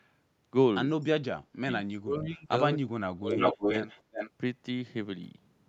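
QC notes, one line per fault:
1.00–1.06 s, echo leak: a very faint copy of the speech returns about 261 ms late, likely loudspeaker pickup that the far-end echo canceller failed to remove.
1.32–1.70 s, 1.97–2.52 s, 3.15–3.57 s, speech suppressed in double talk: the speech sinks deeply or cuts out in pieces, likely because the echo canceller muted both talkers while they spoke at once.
3.32–4.30 s, echo leak: a copy of the speech about as loud as the original comes back 364 ms late, likely loudspeaker sound reaching the microphone unremoved.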